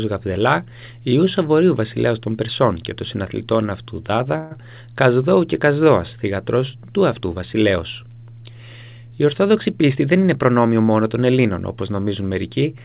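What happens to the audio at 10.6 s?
At 10.6 s the audio is near the end of a jitter buffer speed-up running from 9.57 to 10.67 s. The receiver had queued more audio than it targets, so it cut out short pitch-period chunks again and again, about 150 ms in total, playing the passage at 111% speed with unchanged pitch. It sounds hurried. A spectrogram shows harmonics at their normal spacing but events squeezed closer in time, within the 4 kHz band of the call path.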